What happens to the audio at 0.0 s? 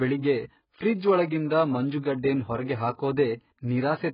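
From 0.0 s onward the speech carries AAC compression damage throughout, likely from a very low-bitrate AAC-LC encode near 12 kbps. Nothing survives above 5.1 kHz, so it sounds dull, with fizzy, warbling sibilants. A spectrogram shows a hard ceiling and patchy, hole-ridden bands below it.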